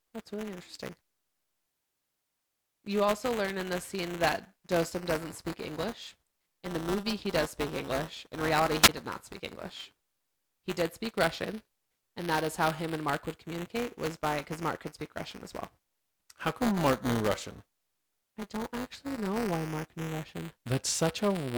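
Speech runs the full clip over a steady robotic buzz at 200 Hz, the signature of buffer tearing: the writer and the reader of the playback ring buffer have drifted so that they cross within every period, and a small slice of each buffer, roughly a twentieth, replays audio from about 10 ms earlier, with a hard seam on each side. The 200 Hz rate fits a buffer period of about 5 ms. What separates this from mains hum or a ground-loop buzz is that it rides on the speech and falls away in the pauses rather than sitting underneath them. At 8.82 to 8.89 s, just before "did not speak", there is a wireless microphone squelch dropout. The FM radio link fades, hiss briefly swells, and the receiver's squelch mutes the output for about 19 ms before the voice comes back. That rise of static ahead of the hole sets it apart from a digital packet dropout, which cuts straight to silence with no noise leading in.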